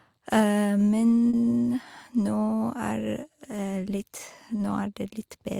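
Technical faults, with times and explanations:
1.29 to 1.35 s, short concealed packet loss: 40 ms of audio arrived too late. The decoder extended the preceding sound over the gap, leaving a brief smear.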